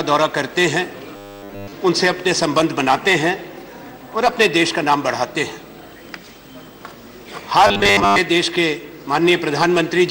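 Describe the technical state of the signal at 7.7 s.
At 7.7 s the signal carries robotic sound from repeated short buffers, running from 7.67 to 8.18 s. Most of that stretch is a 10 ms slice replayed over and over, likely because new audio arrived too late, so a rigid 100 Hz buzz is imposed on the sound. Unlike distortion or a dropout, the sound keeps its rough outline beneath that fixed metallic tone.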